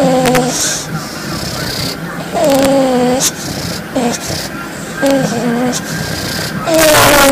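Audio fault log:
0.26–0.61 s, 2.45–2.66 s, 3.25–3.27 s, 5.06–5.11 s and 6.74 s to the end, integer overflow: loud peaks push past the largest value the integer format can hold, by about 1 to 5 dB, and instead of being held at the limit they wrap around to the opposite extreme. Each over-limit peak jumps across the full range, so these passages crack violently, far harsher than clipping, worst in the final stretch where the overdrive is greatest.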